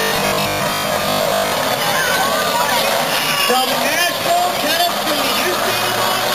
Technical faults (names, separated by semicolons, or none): robotic sound from repeated short buffers